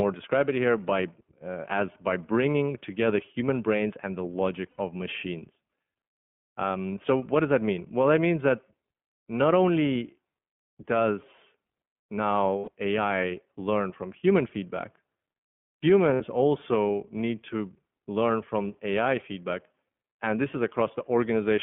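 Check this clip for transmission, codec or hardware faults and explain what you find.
Two faults are present: the speech went through the iLBC codec, and three short runs of lost iLBC frames interrupt it.

The iLBC codec coded each short frame on its own over a telephone line from about 150 Hz to 3.4 kHz. Its coarse, roughly 20 ms frames, fitting about 15.2 kbps, leave the speech dull and audibly rough and synthetic.

Lost iLBC frames occur at 4.70 to 4.80 s (80 ms), 12.58 to 12.69 s (100 ms) and 16.14 to 16.21 s (60 ms). Each time, the decoder filled the gap by repeating the last pitch cycle mixed with noise. This produces a brief held, buzzy vowel before the speech snaps straight back.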